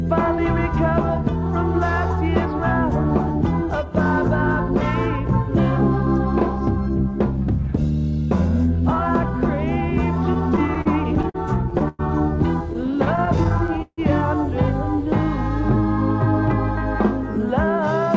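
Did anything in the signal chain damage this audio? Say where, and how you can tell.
Yes. Late packets repeatedly emptied the call's jitter buffer, and the receiver stretched the last sound until audio resumed. These repeated stalls (stutter) run from 10.34 to 12.01 s and 12.71 to 13.99 s, with gaps up to 153 ms, so the sound drags and stutters without losing anything.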